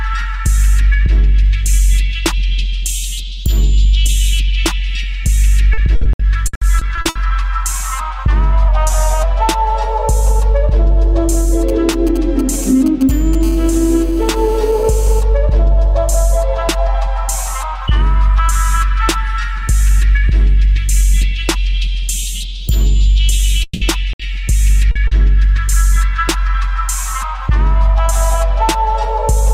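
From 5.73 to 7.17 s, repeated packet loss (robotic sound) leaves ten gaps, the longest 60 ms, each patched by continuing the last sound. About 31% of the span is concealed, giving choppy audio with pieces missing.

Between 8.68 and 9.24 s, playback slows by about 5.6% and drops nearly a semitone (about 99 cents), likely a drift correction step in clock-matching software.

From 11.69 to 13.35 s, GSM signalling bursts from a nearby 2G phone are rectified by the audio circuit, producing a galloping dit-dit-dit of short 217 Hz buzzes roughly 20 dB below the signal.

From 13.43 to 15.21 s, GSM phone buzz continues as the phone transmits steadily: a hard, raspy 217 Hz buzz rich in harmonics, about 25 dB below the signal.

At 23.63 to 23.83 s, the sound is held as a fading buzz or hiss for 180 ms and resumes further on with that stretch lost, with no silence left in between. The likely cause is a long network dropout.

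At 24.13 to 24.21 s, a burst of packet loss drops 60 ms. The last sound is continued and faded before the audio resumes past the gap.

At 24.91 s and 25.07 s, short concealed packet loss fills two 40 ms holes by extending the preceding sound, heard as brief smears.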